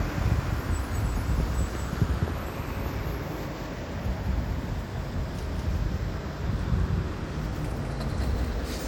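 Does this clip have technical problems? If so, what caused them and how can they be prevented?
Yes. The audio was likely captured twice, through a second, slower path, producing a doubled audio track throughout: a dry copy about 5 dB quieter trails roughly a fifth of a second behind. Route each source through only one capture path and mute duplicate inputs or monitor returns.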